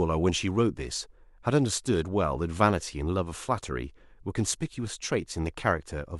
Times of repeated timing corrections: none

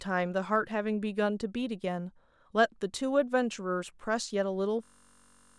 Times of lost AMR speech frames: none

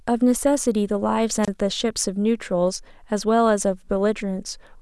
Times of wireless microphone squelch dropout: 1.42-1.49

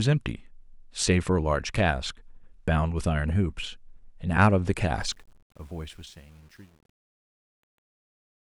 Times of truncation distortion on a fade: 5.02-8.41

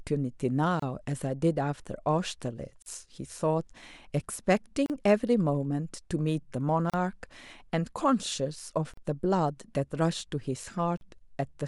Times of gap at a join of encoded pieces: 0.80-0.82, 2.82-2.86, 4.86-4.90, 6.90-6.94, 8.94-8.97, 10.97-11.01

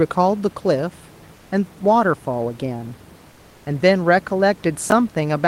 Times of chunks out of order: 4.90

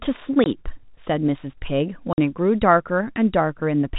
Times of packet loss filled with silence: 0.44-0.46, 2.13-2.18

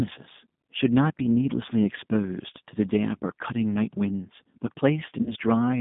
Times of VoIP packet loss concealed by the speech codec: 5.23-5.33

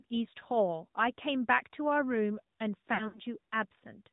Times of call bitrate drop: none

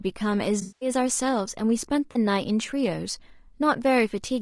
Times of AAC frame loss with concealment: 0.61-0.89, 2.12-2.17

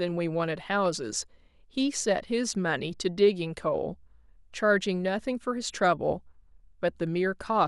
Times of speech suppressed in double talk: none

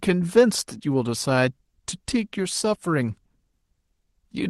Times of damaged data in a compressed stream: none

